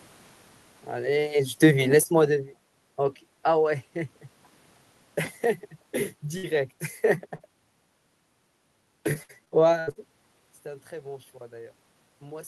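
From 1.0 to 2.77 s the speech starts loud and then sinks by about 8 dB, the room noise sinking with it. This is automatic gain falling. Around 1.0 s the talker appears to move, and the gain control, judging the input too loud, eases its gain down over nearly two seconds. Voice and background drop together, not just the voice.

At 6.37 to 6.45 s the speech turns briefly into a held, fading continuation of the previous sound, then picks up slightly further on. This is a burst of packet loss. About 60 ms of audio never arrived in time. The receiver stretched the last sound over roughly 58 ms, lowering its level as it went, and the speech in that hole is simply gone.

At 7.35 s a shorter smear or wobble passes quickly. This is short concealed packet loss. Some 40 ms went missing, and about 42 ms of patched sound, built by carrying the last sound forward and blending back into the real signal, covers the hole. 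The gap is small enough to come across as a brief blur rather than a dropout.

Between 9.13 and 9.97 s the speech turns choppy, with a robotic edge. This is repeated packet loss (robotic sound). Six separate gaps fall close together, totalling about 260 ms lost, and the longest is 74 ms. Each hole is filled by extending the last sound, and roughly 29% of the stretch is patched audio. The repeated synthetic fill is what gives it that mechanical texture, with pieces of speech missing.

From 10.63 s to the end the voice and room noise swell together. This is automatic gain rising. Around 10.0 s the talker appears to move away, and the input drops by about 16 dB. The gain control, now finding the signal too quiet, raises its gain gradually over the last couple of seconds, lifting the background along with the voice.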